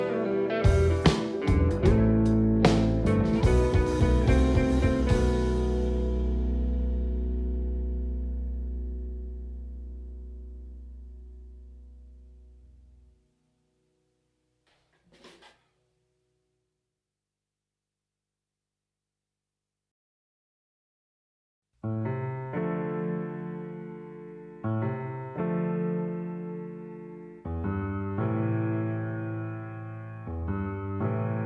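Nothing technical stands out here; the audio runs steadily from the first moment to the last, with no technical problem to point to.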